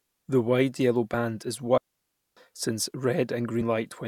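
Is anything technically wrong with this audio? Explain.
Yes, there are two kinds of fault in this speech clip. First, damaged data in the compressed stream, as two brief blips at about 1.13 s and again at 3.61 s. Corrupted bytes in the encoded file mean the decoder can't read those frames properly, so it loses its place and hunts for the next valid frame header. Each one comes out as a quick glitch.

Second, there's a digital wireless dropout from 1.78 s to 2.37 s, so the audio just vanishes for about 0.59 s. That's what a digital radio link does when it loses too much data: instead of passing through garbage, the receiver mutes behind a very short fade. You hear a clean hole of near silence, with no hiss or noise burst leading in or trailing out, and then the speech simply resumes.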